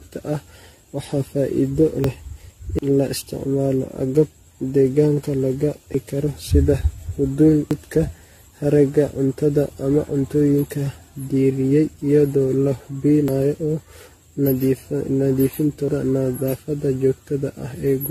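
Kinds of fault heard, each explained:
Generation loss: The sound is swirly, hollow and smeared, with blurred attacks. It likely comes from around ten repeated lossy encodes, fitting AAC-LC at 64 kbit/s. A single encode at that rate would not sound this degraded.
Dropped buffer (overrun): Seven skips, from 2.04 s to 15.88 s, each an abrupt jump forward in the speech, skipping roughly a tenth to a third of a second. There is no silent gap, unlike a dropout, so the likely cause is overwritten capture buffers.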